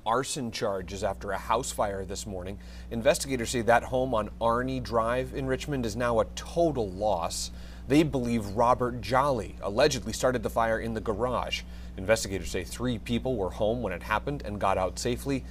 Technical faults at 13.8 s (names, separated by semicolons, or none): mains hum